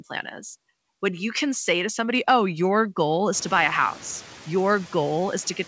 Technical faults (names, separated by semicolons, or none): none